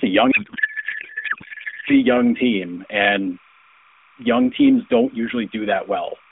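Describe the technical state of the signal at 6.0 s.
At 6.0 s, as everywhere in this speech clip, timecode bleed is present: linear timecode running at 29.97 frames per second leaks in from a neighbouring track or cable. Its square wave flips between tones near 1 and 2 kHz, heard as a faint steady chirping warble roughly 35 dB below the speech. On a spectrogram it shows as unbroken horizontal lines at those two frequencies, inside the narrow mobile band the speech occupies.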